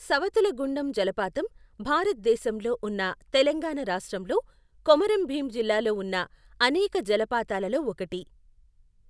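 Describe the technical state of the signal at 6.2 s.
At 6.2 s the speech signal is intact, with no audible technical fault at that moment.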